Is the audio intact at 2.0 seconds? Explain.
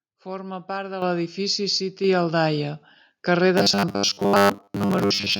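No. At 2.04 s, right after "part de l'edifici", the microphone volume is stepped up: the calling software judged the input too quiet and raised the device's input gain in a single step of about 4 dB. Because the adjustment happens before the signal is processed, the voice and the background noise both jump to the higher level at the same instant, producing an abrupt, unnatural loudness change.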